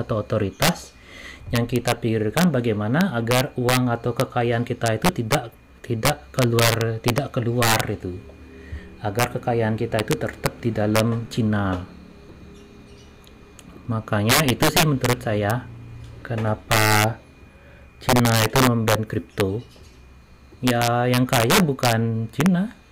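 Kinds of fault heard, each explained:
Integer overflow, throughout: the signal is pushed about 7 dB beyond what the integer format can hold, and instead of being limited, any sample that exceeds the maximum wraps around to the opposite extreme. Only a small fraction of samples, under one percent, cross that line, so most of the sound passes intact, but every loud peak snaps violently across the full range, producing harsh, sudden cracks far sharper than ordinary clipping.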